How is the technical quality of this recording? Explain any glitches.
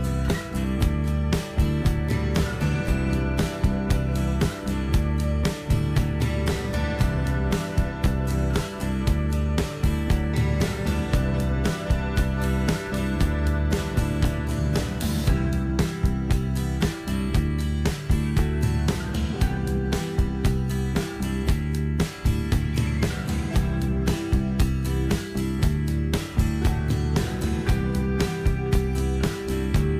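No glitches are audible anywhere in the recording, and there is nothing to explain.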